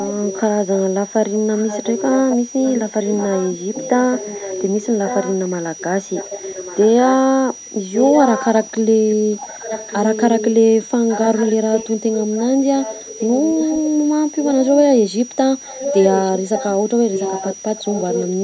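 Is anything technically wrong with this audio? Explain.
Yes, two things. First, a switching supply whistle runs the whole way through: a thin high tone sitting between about 5.7 and 5.9 kHz, around 20 dB under the speech, wandering a little in pitch within that band. That's a switching power supply dropping into an audible burst mode or beating against another supply somewhere in the chain, and its whine gets into the audio.

Second, there's an echo leak. A delayed copy of the speech trails the original by about 1.15 s, from 0 to 6.88 s, 7.93 to 10.46 s, 11.09 to 15.0 s and 15.64 to 18.26 s. It sits roughly 10 dB down in the first and third stretches and only about 5 dB down in the second and fourth. The likely cause is a far end on loudspeaker whose echo canceller didn't fully scrub what its mic picked up, so that leftover got sent back. The call's mic processing is band-limiting everything, with nothing above 8 kHz.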